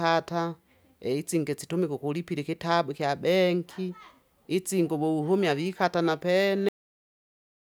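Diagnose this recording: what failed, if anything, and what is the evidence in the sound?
Cut-off end at 6.69 s: the speech stops abruptly right after "itsingi wewuhumya vikata na", mid-sound, and drops straight to digital silence for the remaining 1.1 s with no decay or room tail. This points to the driver or buffer stage, or to storage during writing. The final buffers of audio were never written or played out, so the sound is truncated at a buffer boundary rather than ending naturally.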